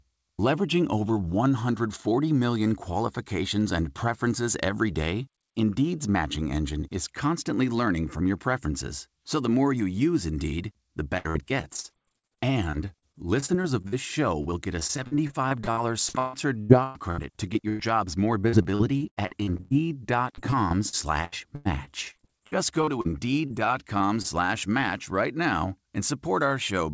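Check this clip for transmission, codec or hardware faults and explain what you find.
Yes, there are transmission faults: four stretches of repeated packet loss, followed by three brief concealed losses. The audio comes through a call path with nothing above 8 kHz, which fits a wideband codec such as G.722.

Repeated packet loss (robotic sound) affects 11.18–13.94 s, 14.42–17.81 s, 18.41–19.74 s and 20.35–23.07 s. In each stretch, 10 to 20 holes arrive in quick succession, and each is patched by extending the preceding sound. Between 18% and 31% of each stretch is patched, and the longest hole is 144 ms. The result is choppy speech with pieces missing. What separates this from single losses is how densely the holes are packed.

Short concealed packet loss occurs at 23.47–23.52 s, 23.98–24.02 s and 24.22–24.26 s, the last just before "match right now". About 20 ms of audio is missing each time. 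The receiver bridges each hole by continuing the last sound and then blending back into the real audio. Each one is heard as an isolated smear or wobble, not as a hard click or a silent dropout.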